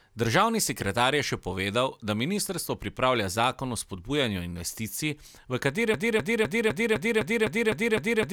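At 5.94 s the speech locks into a broken-record loop: a quarter-second fragment, roughly 0.25 s long, plays back to back nine times in a row, identical each pass, and it never recovers before the clip ends. That stutter is most likely the player or stream stalling and resending the last chunk it had buffered, so whatever should have followed in those final couple of seconds is simply gone.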